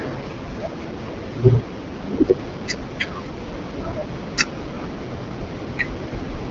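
Rough, raspy speech runs through the whole clip, and the band stops short with nothing above 7.5 kHz. That is AMR wideband (HD Voice) codec damage at a low rate, which fits the 8.85 kbit/s mode. The coder models speech up to 6.4 kHz from a pulse-excited vocal tract and fills the top band with shaped noise, and at this rate it has too few bits for a clean excitation.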